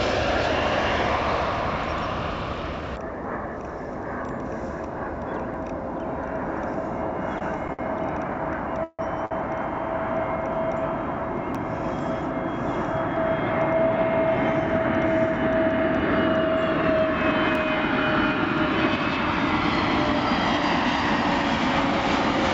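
Short clicks at 5.54, 11.55 and 17.55 s are overlapping chunks: every 6.0 s a chunk starts early and 6.5 ms replays at the join. Between 7.39 and 9.33 s there are repeated stalls (stutter): five times packets arrived late, the jitter buffer ran dry, and the receiver stretched the preceding sound. That added about 300 ms in total, the longest gap lasting 150 ms, with nothing lost. Behind this sits the WebRTC call path, where nothing above 8 kHz remains, consistent with G.722 at 64 kbps.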